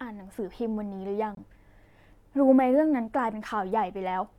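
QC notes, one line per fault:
1.35–1.39 s, corrupt frame muted: the decoder rejected damaged compressed data and the player substituted silence, leaving an abrupt 42 ms hole that fits two lost frames of about 21 ms each. The waveform drops straight to near-flat silence, and the spectrogram shows a sharp-edged blank column with timing intact either side.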